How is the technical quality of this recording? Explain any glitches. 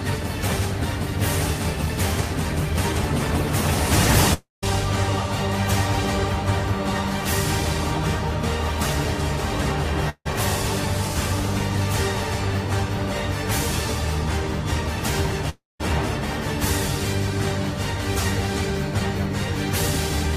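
The recording is marred by three gaps at 4.33 to 4.64 s, 10.09 to 10.34 s and 15.49 to 15.81 s. In each, the sound smears into a fading buzz, then drops to near silence (about 0.16 s, 0.06 s and 0.19 s), before resuming with material missing, roughly 0.3 s, 0.16 s and 0.3 s. This is likely a long network dropout: packets stopped arriving, the receiver stretched the last audio, and playback skipped past the lost part.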